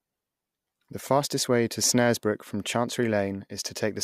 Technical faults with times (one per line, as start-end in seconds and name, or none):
none